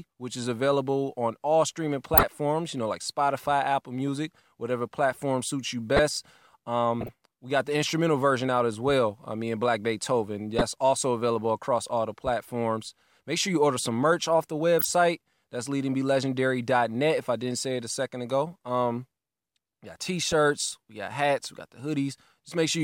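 Short bursts of corrupt frame decoded sound land at 2.18–2.23 s, 5.96–5.99 s, 7.01–7.09 s, 10.59–10.62 s, 14.79–14.85 s and 20.32 s. Damaged compressed frames were played anyway, so misread gains throw energy into the wrong frequencies for a frame or a few. Each is a chirp or noisy blip, strongest in the first two. Unlike a dropout or a smoothed-over gap, the speech is replaced by something foreign.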